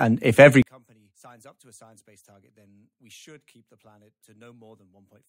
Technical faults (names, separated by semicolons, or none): one channel inverted